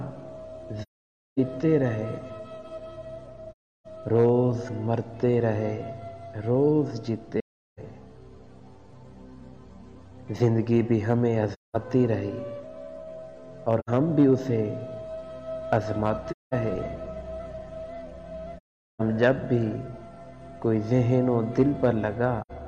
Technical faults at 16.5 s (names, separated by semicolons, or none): AAC frame loss with muting